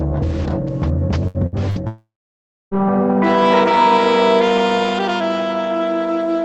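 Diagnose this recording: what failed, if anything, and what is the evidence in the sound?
Network stage, burst of packet loss: at 1.27 to 1.37 s, 1.46 to 1.55 s and 1.70 to 1.79 s the music smears into a held, fading tone. Each time roughly 60 ms of packets never reached the jitter buffer, concealment extended the last sound, and playback resumed further on.

Network stage, long network dropout: from 1.88 to 2.74 s the music turns into a fading continuation, then about 0.64 s of silence, and resumes with roughly 0.84 s missing. The likely cause is a network outage that starved the receiver through the band-limited Opus call path.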